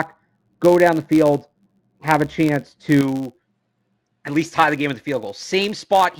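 From the very start to about 3.01 s, the speech sounds dull and muffled. That's de-emphasis applied wrongly: a treble cut meant to undo pre-emphasis was applied where it didn't belong, so the response slides smoothly downward and sits about 11 dB lower at 10 kHz than at 1 kHz.

Running under the whole clip is a buzz at about 93.8 Hz, which fits a 512-sample block size. It's a filter restarted on every block: the filter drops its state and starts each block from silence, leaving a small tick each time, and the buzz rises and falls with the speech level.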